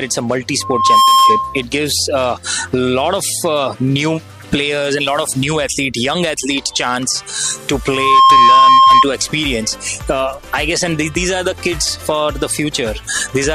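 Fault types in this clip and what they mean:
loudspeaker feedback squeal: a steady 1.1 kHz tone swells within half a second to well above the sound, twice; a microphone is re-amplifying its own loudspeaker.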